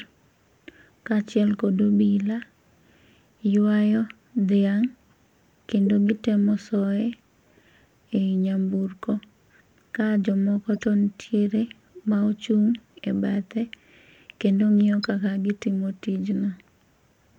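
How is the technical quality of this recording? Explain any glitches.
Three brief chirp-like blips of misplaced noise mar the speech, at 5.86 s, 10.76 to 10.83 s and 15.03 to 15.10 s. They come from a corrupt frame decoded: damaged compressed data played anyway, putting energy at the wrong frequencies, peaking around -20 to -25 dBFS.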